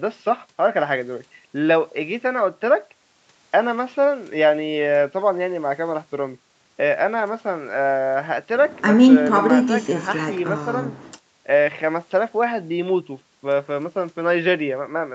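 No technical faults are audible in this speech.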